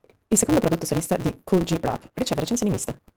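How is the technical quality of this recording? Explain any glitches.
Poor: one fault runs through the whole speech clip. A block size mismatch (truncated) means each block loses its tail because the next stage reads only about 256 samples. This leaves a 188 Hz buzz, and speech runs 1.88 times fast with its timbre kept, unlike a sample-rate error, which would raise pitch.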